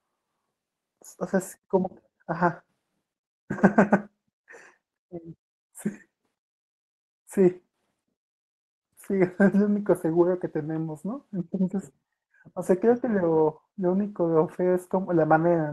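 No faults detected in the speech; it passes through an Opus call path whose top end stops around 12 kHz, consistent with normal band-limiting at that setting.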